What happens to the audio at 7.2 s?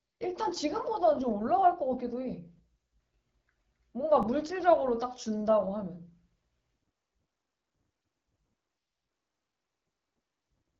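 At 7.2 s the speech is running through the AMR wideband (HD Voice) codec, the same as for the whole clip. At a low rate like 8.85 kbit/s the pulse-driven vocal tract model can't keep up, so the voice comes out rough and raspy. The top band above 6.4 kHz is only shaped noise.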